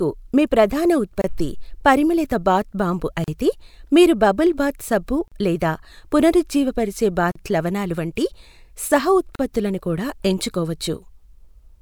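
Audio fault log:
1.22, 3.24, 5.28, 7.32 and 9.35 s: gap at a join of encoded pieces. Silences of 26.5 ms, then 37.6 ms, recur every 2.0 s, left by untrimmed encoder delay and padding. Unlike a dropout, nothing is lost: the sound resumes exactly where it stopped.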